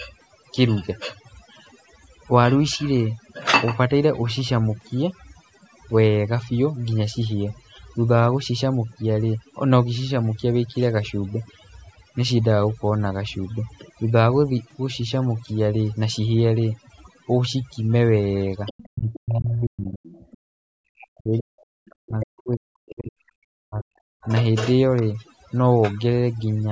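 Overdone noise removal runs through the whole speech clip. The noise reduction was pushed too hard, so individual frequency bands near its noise estimate are pulled far down or switched off. The background drops and breaks up into twinkling specks.

From 18.66 to 19.19 s, other side's voice leaking through appears: a second voice, about 15 dB below the talker, most likely loudspeaker echo the echo canceller failed to remove. Further bursts follow at 20.03–20.38 s (about 25 dB down), 21.59–21.63 s (about 35 dB down), 22.21–22.40 s (about 15 dB down) and 24.96–25.02 s (about 25 dB down).

Speech suppressed in double talk overlaps this, from 18.87 to 20.02 s and again from 20.61 to 24.29 s. The talker's voice dips and breaks into pieces, at worst by around 40 dB, for roughly a second and then roughly three seconds in total. The likely cause is the echo canceller turning everything down because it couldn't separate the talker from the echo while both sides spoke. 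Across all of this, the call's microphone processing passes nothing above 8 kHz.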